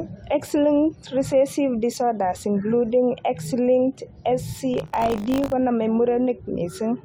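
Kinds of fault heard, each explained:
Buffer tearing: From 4.72 to 5.53 s the speech picks up a hard, robotic 50 Hz buzz that is present only while sound is playing. The program filling the playback ring buffer and the hardware reading it have slipped out of step, so their positions cross inside every 20 ms period. A small slice of each period holds stale audio from around 40 ms earlier, spliced in with abrupt joins on both sides.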